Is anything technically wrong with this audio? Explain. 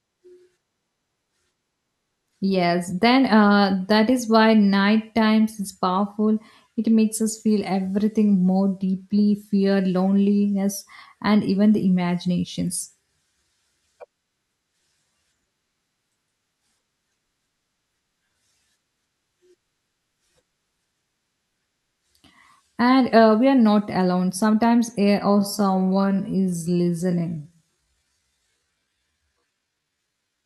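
Yes. A time-stretched section runs from 25.29 s to the end at 30.46 s. The speech there plays at about 0.61 times its normal pace, likely because software lengthened that stretch to fill a set duration while holding pitch steady by repeating short slices of the audio. The slowdown sets in abruptly with no change in pitch, and the final five seconds drag.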